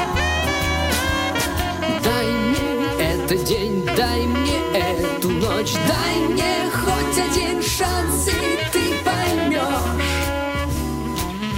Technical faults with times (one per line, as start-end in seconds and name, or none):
0.00-11.57 USB whine